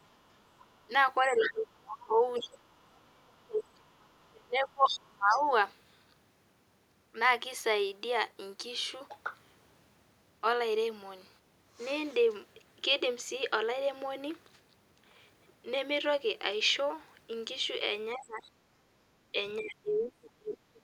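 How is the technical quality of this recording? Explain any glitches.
The recording has clear echo-cancellation trouble, concentrated at the start and the end.

From 0.03 to 5.42 s, the other side's voice leaks through, sitting roughly 10 dB under the talker, likely loudspeaker echo the canceller didn't fully remove.

Speech suppressed in double talk shows up twice. From 1.21 to 5.5 s the talker dips hard, around 30 dB at worst, for about three seconds in all. From 18.15 to 20.83 s it drops around 35 dB, for roughly a second and a half. Both times it's likely the canceller muting everything while both sides talked.

Background gated by the echo canceller hits from 18.83 to 19.1 s: room sound drops about 12 dB for a moment, then returns once the canceller releases.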